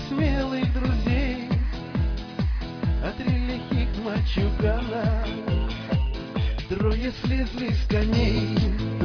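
No technical fault can be heard anywhere in this clip. Nothing in the audio points to a problem in how it was captured, processed or delivered.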